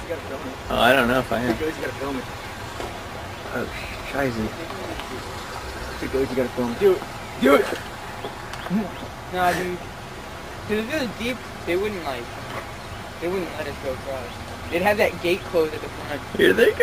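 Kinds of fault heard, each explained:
Overlap between stream segments: two adjacent stream segments, which here appear to be about 2 s long, claim the same stretch of time, so the player trims audio that was never duplicated. The trims remove about 6 ms and 14 ms, and the waveform jumps, heard as tiny skips at 1.83 s and 7.81 s.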